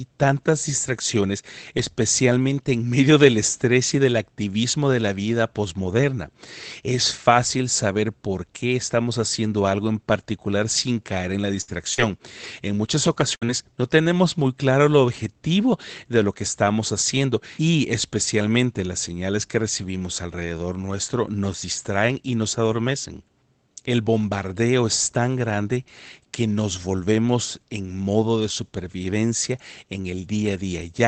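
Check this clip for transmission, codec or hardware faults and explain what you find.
One transmission fault, a run of repeated packet loss (robotic sound) from 11.61 to 13.62 s, between "sin caer en la" and "no tenemos muy claro". Packets kept failing to arrive, and each hole, the longest 64 ms, was patched by stretching the preceding sound. In all, about a fifth of a second was filled in, so the passage turns choppy, with pieces missing. The audio also carries the coding noise and top-end limit of a wideband call codec such as Opus, with nothing above 8 kHz.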